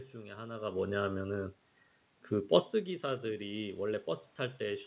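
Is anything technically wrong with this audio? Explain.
Yes, there is one fault. Automatic gain rising occurs from 2.29 to 4.09 s. After the talker moves away around 2.5 s and the level drops by about 15 dB, the gain control slowly adds about 4 dB. Voice and room noise swell together over nearly two seconds, whereas the talker's movement changes only the voice.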